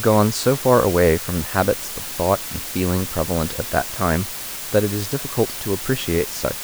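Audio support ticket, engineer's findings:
Low bit depth with dither, whole clip: constant even hiss under speech, about 10 dB down, no grit. Dithered 5-bit quantiser; undithered would distort.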